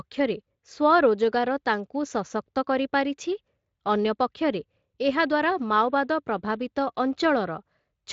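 No faults are present in this speech clip; it runs through a Speex path at about 24 kbps with only light coding texture, and the band stops near 7.5 kHz.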